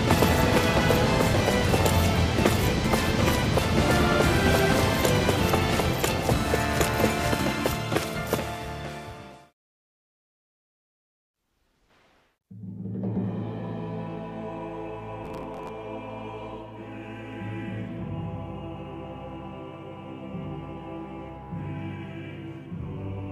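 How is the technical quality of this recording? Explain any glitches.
There's one real glitch here: a burst of processor overload crackle from about 15.24 to 15.69 s. For just under half a second, the processor couldn't keep up and kept missing its buffer deadlines again and again. Buffers seem to be around 10 ms, so we're talking about fifteen or so misses. Each miss replayed a scrap of old audio with hard edges, which is why you hear a gritty, tearing crackle over the sound. It stops once the load clears.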